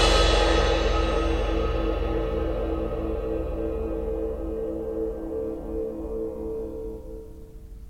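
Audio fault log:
No faults found in this music clip.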